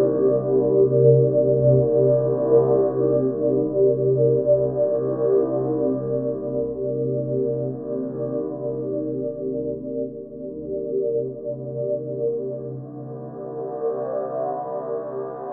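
No technical faults can be heard anywhere in the audio; the signal stays continuous and stable throughout.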